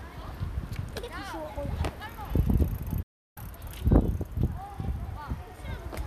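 At 2.02 s and again at 4.47 s there's a tiny skip, roughly 40 ms gone, with the two sides butted together. That's likely audio missing between chunks, dropped at block boundaries. Between them, from 3.02 to 3.37 s, a digital broadcast dropout mutes the sound with a quick 8 ms fade for 336 ms, which fits a run of lost frames, before it picks up again.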